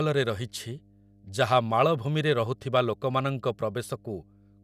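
A steady mains hum sits under the speech for the entire clip, a low 50 Hz drone from power-line interference. The likely entry point is a ground loop or a nearby transformer. At roughly 30 dB below the speech, it shows on a spectrogram as an unbroken horizontal line at 50 Hz with some low harmonics above it.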